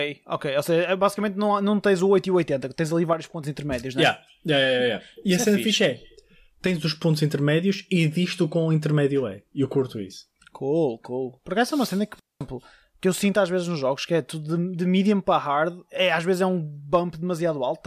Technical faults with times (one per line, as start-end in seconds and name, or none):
3.13-3.43 one channel drops out
6.67-6.83 one channel drops out
12.19-12.41 digital wireless dropout